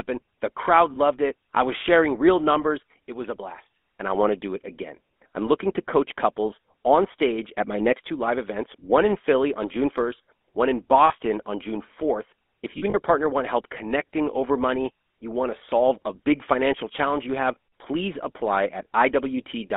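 Throughout the speech, the GSM full-rate codec is plainly audible. The voice carries a steady buzzy, gravelly roughness because the decoder rebuilds it from a vocal-tract model driven by a coarse, regularly spaced pulse excitation. The band runs only from about 250 Hz to 3.5 kHz, so the sound is thin and muffled. This fits a 13 kbps full-rate stream.

Lost GSM frames first appear at 0.94 to 0.97 s, just before "it I was sharing". It is a brief 20 ms patch, consistent with one missing frame. At 11.06 to 11.15 s, right after "one in", a 40 ms loss is heard. From 12.78 to 12.95 s, just before "partner want help connecting", about 80 ms of damage is scattered across 160 ms, with the longest run around 40 ms. In each gap the decoder repeats the last good frame's settings, so the voice briefly freezes into a rough, metallic ring.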